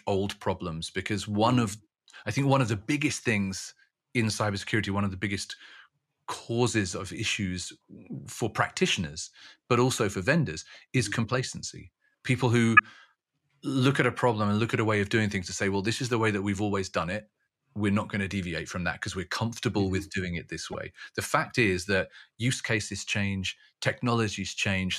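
Speech with two corrupt frame decoded faults. Damaged frames played anyway, giving brief blips at 12.77–12.80 s and 20.72–20.75 s, much quieter.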